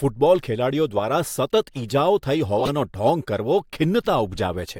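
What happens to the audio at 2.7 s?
From 2.60 to 2.70 s the speech is hit by a corrupt frame decoded fault: flipped bits in the compressed data were decoded anyway, misplacing energy across the spectrum. It sounds like a loud, brief chirp or burst of noise, consistent with about five damaged frames.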